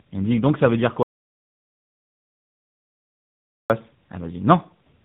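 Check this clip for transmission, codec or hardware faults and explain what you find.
Two faults stand out: tandem speech coding across the whole clip, and a long audio dropout to silence in the middle.

Tandem speech coding runs from start to finish. The speech went through GSM full rate at 13 kbit/s, then G.711 A-law, then AMR-NB at 10.2 kbit/s. That makes two speech codecs in a row, each re-encoding the other's artefacts. The result sounds rough, muffled and warbly. On a spectrogram, nothing appears above 3.8 kHz, and the harmonics look smeared.

The audio dropout to silence runs from 1.03 to 3.70 s, right after "donc ça veut dire". About 2.67 s of speech is lost. The input was likely lost while silence kept being written. The waveform goes to a flat line with no room tone, and the spectrogram shows a blank gap.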